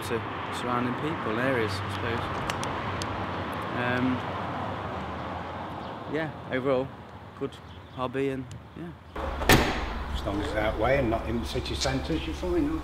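Nothing stood out as a technical fault on listening.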